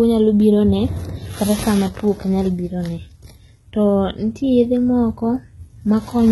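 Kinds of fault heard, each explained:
HE-AAC compression: The whole speech clip shows heavy coding damage, likely from HE-AAC v2 at a very low bitrate in the region of 16 kbps. The codec spends its bits on the lower spectrum and synthesises the treble by copying lower bands upward under a coarse envelope. The top end therefore sounds artificial, with s sounds turning gritty and metallic, and nothing survives above about 11.8 kHz.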